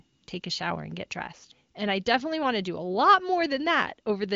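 The speech carries no technical faults, having passed through the AMR wideband (HD Voice) codec at 23.05 kbit/s, a high rate, which leaves at most faint traces of coding and a bandwidth that ends near 7.5 kHz, as expected for this path.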